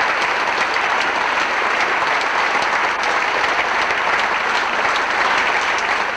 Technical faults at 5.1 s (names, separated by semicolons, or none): none